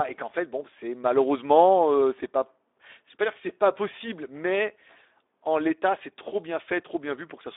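From start to finish the speech sounds hoarse and plainly noisy. It is also boxed into a narrow telephone band of about 300 Hz to 3.7 kHz, with nothing above 3.8 kHz. That is Speex codec damage. At a bitrate around 11 kbps this CELP coder has too few bits to rebuild the excitation signal faithfully, so the voice's fine texture turns to noise.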